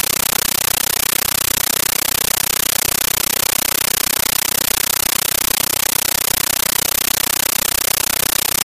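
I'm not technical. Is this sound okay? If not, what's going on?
No. Compressed stream played as audio, from start to finish: undecoded Dolby Digital data is being played directly, so you hear loud static chattering 31 times a second.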